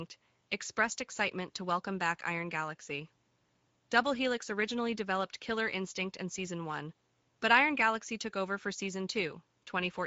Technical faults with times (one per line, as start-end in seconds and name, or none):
0.00-10.06 Speex codec